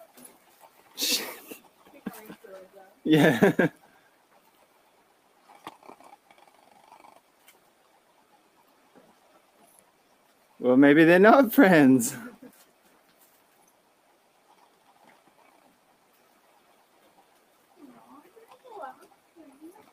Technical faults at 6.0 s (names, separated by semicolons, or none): noise suppressor applied to music or sounds; sound cut by the noise suppressor